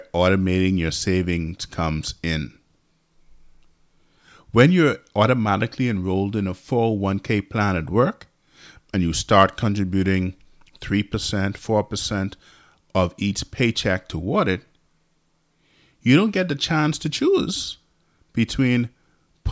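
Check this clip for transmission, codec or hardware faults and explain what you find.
I checked the clip and found no faults to explain.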